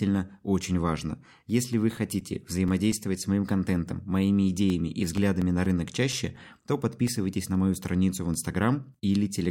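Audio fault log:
0.78–3.63 s, CD scratch ticks: thirteen short clicks at roughly four to five per second, each no longer than about 5 ms, of uneven strength. A scratch destroys more data than error correction can rebuild once per disc revolution, so the player patches or mutes a tiny span of samples each turn. That repeating loss is what gives the speech its regular ticking pulse.
4.70–7.55 s, CD scratch ticks: a second run of thirteen ticks at the same rate of roughly four to five per second, ending just before "мою страницу в". The longest gaps here are slightly longer, around 7 ms. The ticks again vary in strength.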